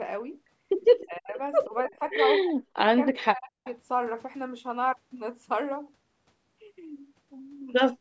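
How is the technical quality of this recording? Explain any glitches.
The recording has two call-related faults, both concentrated in the first four seconds.

Speech suppressed in double talk, from 1.03 to 1.39 s, 1.67 to 2.14 s, 2.44 to 2.9 s and 3.1 to 3.66 s: the echo canceller, likely confused by both sides talking at once, turned the near talker down along with the echo. The voice sinks by roughly 25 to 40 dB in these stretches.

Echo leak, from 3.64 to 3.74 s: the loudspeaker side's echo canceller likely failed to remove all of its loudspeaker's sound, so a faint copy of the speech returns about 310 ms late, at about 25 dB below the voice, as a brief trailing scrap. The call microphone processing also limits the audio to nothing above 8 kHz.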